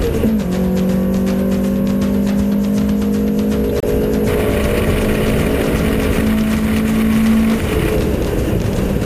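There's one quick glitch here: a corrupt frame decoded at about 3.80 to 3.85 s. It comes across as a short, loud chirp, squeak, blip or burst of noise, peaking around -5 dBFS, that doesn't belong to the surrounding sound. What's happened is that bits got flipped inside a handful of compressed frames, and the decoder played them anyway. The garbled gains and codes dumped energy into the wrong frequencies for those few frames, roughly 45 ms in all.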